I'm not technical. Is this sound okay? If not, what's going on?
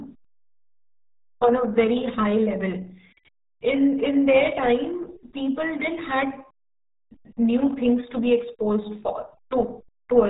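No. Throughout, the speech sounds muffled and gargly, with nothing above about 3.8 kHz, the mark of the old RealAudio 14.4 codec, built for dial-up modems.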